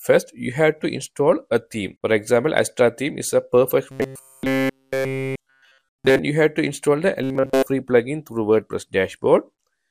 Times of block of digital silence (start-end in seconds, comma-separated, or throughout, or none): none